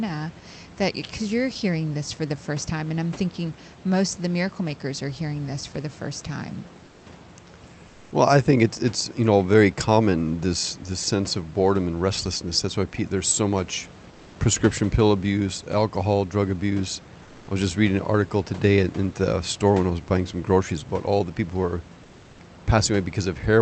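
Speech with comfort noise in place of the background in four short pauses: 6.85–7.03 s after "for the first time", 7.87–8.11 s, 14.11–14.35 s between "there's so much" and "prescription pill abuse alcohol", and 17.23–17.47 s between "abuse alcohol drug abuse" and "I was just reading". Each time the room's background noise gives way to smooth, featureless noise about 1 to 3 dB quieter. The likely cause is Opus discontinuous transmission pausing during silence, with the receiver synthesising filler. Unlike a dropout or noise gate, the background never goes silent; its character flattens, and it is restored when the talker resumes.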